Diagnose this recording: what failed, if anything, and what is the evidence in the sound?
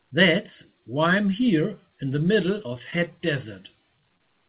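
From 2.58 to 3.2 s the speech turns choppy and robotic, with small pieces missing. This is repeated packet loss at the network stage: eight gaps, the longest 14 ms, each patched by extending the preceding sound, so about 13% of that stretch is synthetic fill.

Near the end there are two brief smears, at 4.09 s and from 4.18 to 4.21 s. Both are short concealed packet loss: roughly 10 ms of audio never arrived in time each time, and the receiver covered the hole by continuing the last sound before blending back, over a G.711 call path with nothing above 4 kHz.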